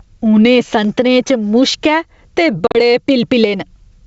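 Speech carried over G.722 wideband telephone coding, whose lower band stays clean enough to suggest the full 64 kbit/s mode, shows gain pumping from start to finish. The input gain was likely set far too high, with a fast limiter or compressor reining it back on each loud syllable. The level therefore swings by around 10 dB, leaving the speech squashed and its loud and soft passages crowded together. Between 2.67 and 2.77 s there is packet loss on an ADPCM call. About 70 ms of audio is missing, spread over roughly 80 ms in broken runs, the longest lasting 40 ms, which sounds like a handful of short packets dropping out and being filled with silence. Each gap has hard edges. Because the decoder's adaptive predictor and step size lose track of the sender's during the dropouts, the speech that follows comes back slightly distorted before settling within a few tens of milliseconds.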